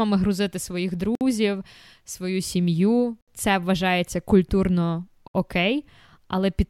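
Gaps at joins of encoded pieces at 1.15 s after "грузити своїх", 3.21 s after "свою сім'ю" and 5.28 s after "вважається культурно", spaced about 2.0 s apart: separately encoded speech segments were joined untrimmed, leaving encoder delay and padding as silences of 57, 67 and 67 ms before speech resumes where it stopped.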